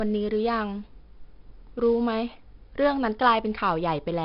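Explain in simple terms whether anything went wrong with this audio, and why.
The speech sounds gritty and hissy from start to finish, with roughness on sharp sounds and a dull, muffled tone, since nothing above about 5.5 kHz remains. This is heavy 4-bit ADPCM compression, which stores each sample as a crude step away from a guess, at what sounds like a low sample rate.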